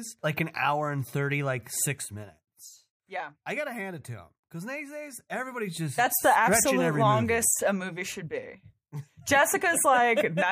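A gain control in this speech clip moves its level in unsmoothed 1 dB jumps, around ten per second, causing zipper noise. From 1.86 to 2.60 s, after "hour and thirty like", the level steps down by roughly 10 dB, and each jump leaves a faint click, so a ticking rides on the speech. From 4.92 to 6.13 s, after "to them because these" and before "the absolute longest", it steps back up by a similar amount with the same zipping.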